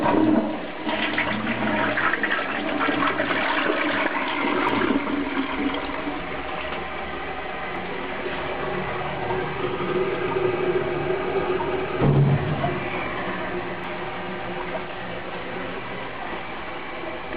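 Brief blips break into the audio at 4.69, 7.76 and 13.84 seconds, each only a few milliseconds long. These are damaged data in a compressed stream: corrupted bytes cause the decoder to misread the affected frames and lose sync until it finds the next frame header.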